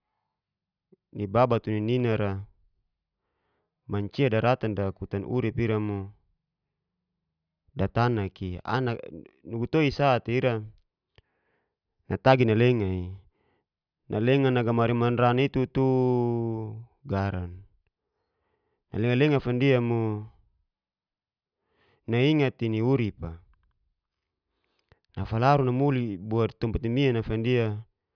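Nothing stood out as a technical fault on listening to the speech.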